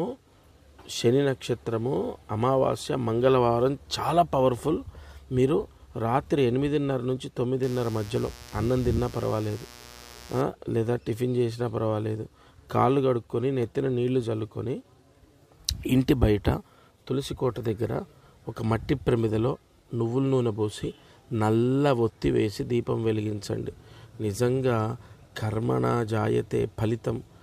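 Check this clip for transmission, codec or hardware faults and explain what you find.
Mains buzz runs from 7.63 to 10.42 s. Sharp switching spikes, likely from a dimmer, rectifier or unshielded lead, enter twice per 60 Hz cycle, so harmonics stack up to several kHz. The result is a steady, raspy buzz roughly 20 dB below the sound.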